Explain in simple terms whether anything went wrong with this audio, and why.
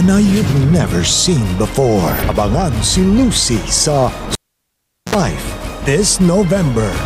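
Something did go wrong: at 4.33 s there's a clear case of the cable being pulled and plugged in. You hear a pop, then the audio drops to near silence for about 0.78 s while the lead is out. As it goes back in, there's a quick 60 Hz mains buzz lasting about 60 ms, because only the plug's tip is touching at first. Then another pop at 5.15 s as the sound comes back.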